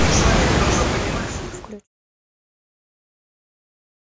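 Speech recording; no technical faults can be heard.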